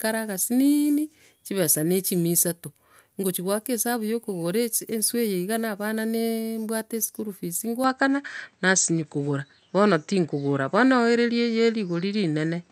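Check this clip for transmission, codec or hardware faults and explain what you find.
One fault is audible, and it runs from 7.84 s to the end of the speech. At that point the sound abruptly turns duller, with nothing above 8.3 kHz, the level shifts by around 5 dB, and a faint new background noise appears, well below the speech. There is no gap at the change. The likely cause is an input switched to a poorer device. A codec bandwidth drop would also narrow the band, but the new noise floor and the level jump suggest that a different input device took over.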